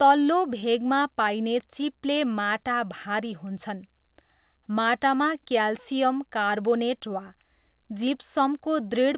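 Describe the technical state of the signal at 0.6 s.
At 0.60 to 0.64 s there is a short concealed packet loss. About 20 ms of audio never arrived and was filled by extending the preceding sound, heard as a brief smear. On a spectrogram this shows as a short stretch of stalled, smeared content under the 4 kHz ceiling of the G.711 path.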